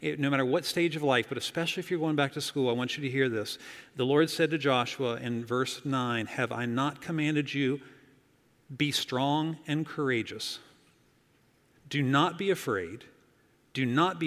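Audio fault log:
Nothing stood out on listening.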